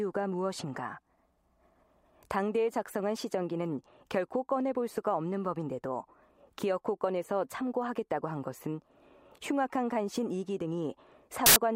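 File tags played as audio at 11.46 to 11.56 s: an embedded cover picture's compressed data is read as samples, giving a hard-edged burst of very loud white noise.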